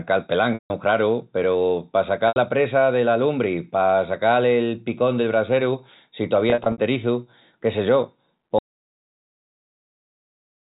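Telephone speech, band-limited at 4 kHz by G.711 mu-law coding, shows packet loss with pitch repetition in three places. From 0.54 to 0.70 s about 160 ms is missing. From 2.28 to 2.36 s about 80 ms is missing. Between 6.50 and 6.78 s about 140 ms is lost in scattered gaps over 280 ms, the longest run 60 ms. The losses are in 20 ms steps, which fits 20 ms packets. To fill each gap the receiver loops the last pitch period, so the sound briefly holds as a buzzy, frozen tone that fades out and cross-fades back into live speech. On a spectrogram these spans show as flat, evenly spaced harmonic stripes with no formant movement, dimming toward the end of the longer gaps. The waveform repeats one identical cycle under a shrinking envelope. From 8.59 s to the end the clip is an audio dropout to silence, most likely from a lost input or link while recording continued. The sound stops abruptly mid-flow with no room tone left, as a dead-flat line in the waveform and a blank spectrogram.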